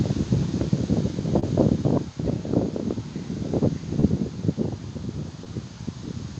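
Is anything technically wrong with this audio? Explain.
Yes. At 1.39 to 1.44 s, 4.00 to 4.04 s and 5.44 to 5.48 s the sound briefly smears: short concealed packet loss, where about 20 ms never arrived and the receiver extended the preceding sound to cover it.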